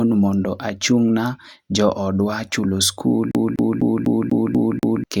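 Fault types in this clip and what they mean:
CD stuck on one turn: a scratch keeps knocking the laser back one track, so from 3.31 s to 5.04 s the same 0.25 s slice of speech repeats seven times, each jump marked by a brief mute, giving the fast, even stutter of a skipping disc.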